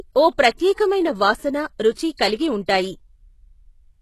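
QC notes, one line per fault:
Throughout: HE-AAC compression, likely the cause of the gritty, lispy treble and plainly audible codec damage, which fits a bitrate around 16 kbps. Band replication copies lower bands upward, so on the spectrogram upper harmonics repeat misaligned, then stop dead above 12.3 kHz.
0.57, 0.75–0.78, 1.94–1.97, 2.17, 2.66–2.68 s: pre-echo, a short hiss of 18 to 36 ms leading each sharp onset. The block's quantisation noise, sized for the attack, fills the quiet just before it, so the waveform shows a fuzzy ramp-up ahead of the attack.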